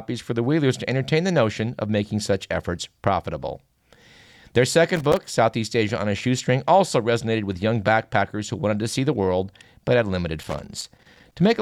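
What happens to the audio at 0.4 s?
Nothing goes wrong at 0.4 s; the speech plays through that moment intact, with no dropout, click or distortion.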